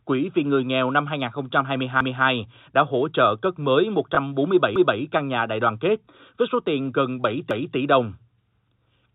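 At 2.01 s the speech jumps back and a quarter-second stretch plays a second time, ending at 2.26 s. The same thing happens from 4.76 to 5.01 s and from 7.51 to 7.76 s. These are overlapping chunks: the audio was handled in blocks about 2.5 s long, and each block began 250 ms before the previous one finished, so every join replays that slice. The regular spacing and the full quarter-second of recognisable repeated speech set it apart from a packet glitch.

At 4.15 s there is a small blip, a packet loss with last packet repeated. A 20 ms gap, which fits one lost packet, was filled by replaying the packet just before it. Unlike the chunk overlaps, nothing audible is repeated as content, and it happens only once. The audio as a whole has the 4 kHz ceiling of G.711 telephone coding.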